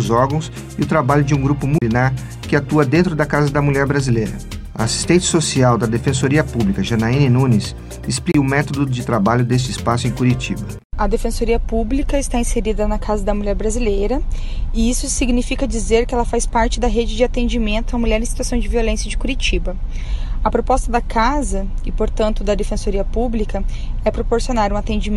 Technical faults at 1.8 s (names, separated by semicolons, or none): CD skip